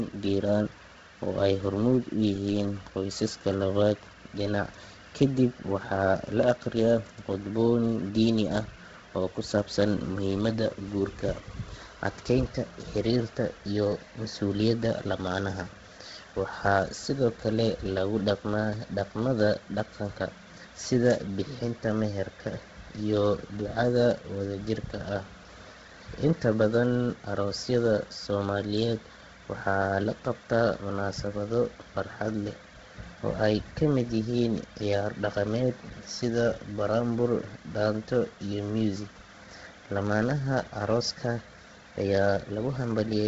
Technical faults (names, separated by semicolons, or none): Bluetooth LC3 compression